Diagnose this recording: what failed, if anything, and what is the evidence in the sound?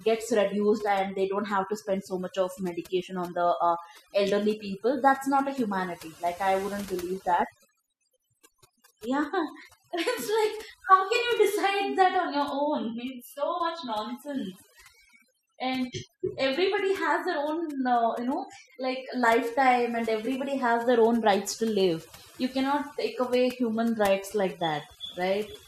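The failure is in the call processing: overdone noise removal across the whole clip. Gaps in the speech drop to near silence with twinkling specks. The suppressor is set too hard, gating individual frequency bands whenever they sit near its noise estimate, so softer parts of the voice get carved away too.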